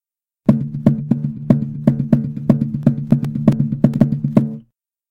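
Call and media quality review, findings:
CD scratch ticks, 2.69–4.28 s: 13 short ticks, each a few milliseconds, about eight per second. Disc-read stage; one blemish per revolution defeats error correction, so the player conceals samples. Regular spacing separates it from random digital clicks.

Compressed frames skipped, 3.97–4.00 s: roughly 70 ms of audio goes missing, jumping ahead. Decoder stage; frames lost or rejected as corrupt. A single jump, unlike the periodic scratch ticks around it.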